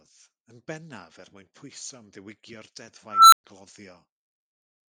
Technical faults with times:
3.11-3.44 unstable filter

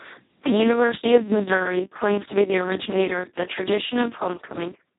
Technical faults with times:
0.00-4.99 Speex codec
0.42-4.17 clock drift buffer slips

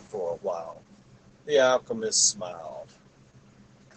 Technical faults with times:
0.00-3.96 Opus voice compression

